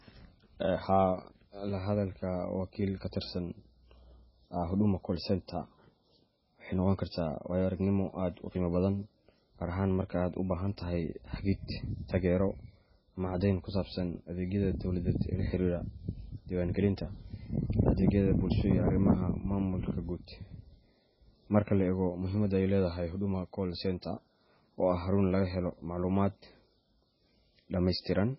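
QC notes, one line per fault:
Throughout, MP3 compression: heavy codec damage with nothing above 5.6 kHz, so s sounds lose their hiss and the speech turns watery and swirly, which fits a very low bitrate around 16 kbps as the likely cause. A spectrogram shows a flat ceiling at 5.6 kHz and speckled gaps below it.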